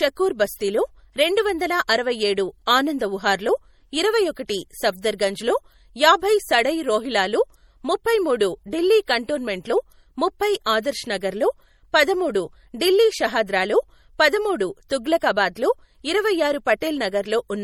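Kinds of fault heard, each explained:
MP3 compression: Throughout, the speech has a watery, swirly quality, with s sounds turning metallic and chirpy and consonant onsets smeared. The damage is plainly audible and likely comes from MP3 encoding at a low bitrate, which fits about 48 kbps. Starved of bits, the encoder drops treble above a fixed frequency and discards weaker spectral lines. A spectrogram would show a hard ceiling on the upper band and speckled gaps flickering on and off between frames.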